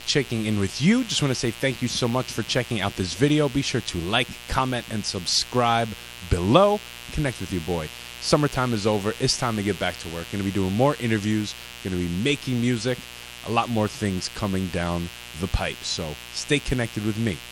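A speech recording with a steady mains buzz running under the whole clip, fairly loud and not far below the speech. Unlike a smooth low hum, it is raspy, with harmonics of 60 Hz reaching several kHz, from switching spikes arriving 120 times a second.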